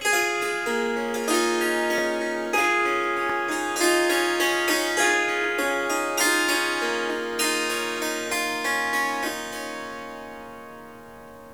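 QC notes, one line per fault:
1.98 s and 3.30 s, repeated buffer. Each time a piece of about 10.7 ms plays twice in a row, with a hard join where the copy begins. New audio did not reach the output in time, so the device played its last buffer again. The length fits a 512-sample buffer. A slice that short is heard as a brief click or buzz rather than a stutter. Nothing seems to be lost; the sound just resumes slightly late.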